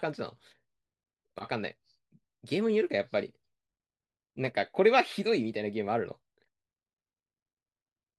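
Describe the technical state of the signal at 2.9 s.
At 2.9 s the speech signal is intact, with no audible fault at that moment.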